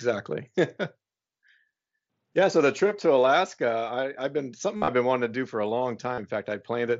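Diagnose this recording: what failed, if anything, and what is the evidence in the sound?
Concealed Bluetooth headset packet loss on the radio link. After "I have been", 4.76 to 4.88 s turns to a held buzzy tone, worst run about 60 ms, warbling back; a brief 40 ms patch follows "do for a long" at 6.14 s. The receiver is replaying recent waveform over lost packets.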